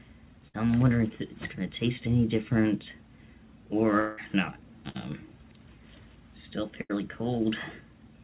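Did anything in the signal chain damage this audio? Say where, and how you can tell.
Yes, the network stage damaged it. There are three bursts of packet loss: 0.48–0.56 s, 4.89–5.11 s and 6.81–6.91 s. Each time the last sound is held and fades as a buzz or hiss for 54 to 80 ms. Then the audio jumps ahead, missing a short piece.

At 4.00–4.19 s the fault sounds like a long network dropout, likely a stall in arrival. The held sound runs about 175 ms and fades without reaching silence. Playback then resumes about 180 ms further on. The band stops near 4 kHz throughout, as expected for a narrowband call codec.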